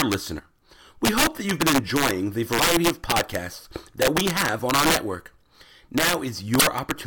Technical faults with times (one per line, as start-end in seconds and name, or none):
0.00-7.07 integer overflow
0.35-0.40 damaged data in a compressed stream
2.55-2.60 damaged data in a compressed stream
6.57-6.63 damaged data in a compressed stream